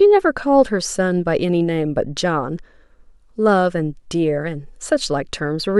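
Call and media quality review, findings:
Nothing stood out on listening to the speech; no findings to raise.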